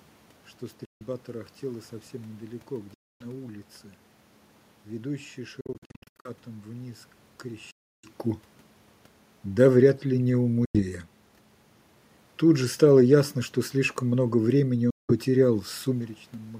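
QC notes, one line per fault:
0.85–1.02 s, 2.94–3.25 s, 5.61–6.30 s, 7.71–8.10 s, 10.65–10.80 s, 14.90–15.13 s: Bluetooth dropout. Output drops to silence, then resumes further along, as though the audio kept running through the gap. The likely cause is wireless packets reaching the headphones too late and being discarded. Gaps last about 90 to 320 ms. The one at 5.61 s is instead broken into short holes scattered over 0.64 s, the longest 76 ms. "тарахтела совсем недалеко" follows the first gap, "вниз к" the third, and "что слишком много времени" comes just before the last.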